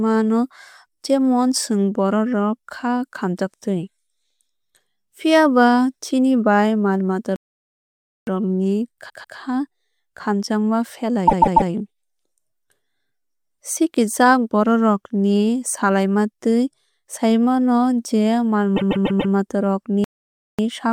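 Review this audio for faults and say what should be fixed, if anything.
Playback stall: the player was likely starved of data or had its output thread blocked, so the output went silent until it caught up. The speech cuts off mid-flow from 7.36 to 8.27 s, a gap of about 0.9 s, and again from 20.04 to 20.59 s, about 0.54 s, straight after "mata rok". Each time it resumes after the dropout. A larger playback buffer and keeping the audio thread free of blocking work would prevent this.

Repeated frames: a 144 ms block of compressed audio was written or sent more than once, which fits six frames of 24 ms each, and the decoder played it again each time. The result is a stutter in which the same fragment loops. At 9.09 to 9.37 s it plays twice extra, adding 288 ms. At 11.27 to 11.70 s it plays three times extra, adding 432 ms. At 18.76 to 19.33 s it plays four times extra, adding 576 ms, just before "mata rok". 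Checking frame sequence numbers and discarding duplicates before decoding would prevent this.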